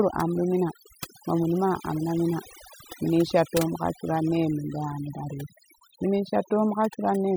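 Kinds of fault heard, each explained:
overdone noise removal: noise reduction set too strong cut frequency bands near the noise estimate throughout, leaving a reduced background broken up into twinkling specks.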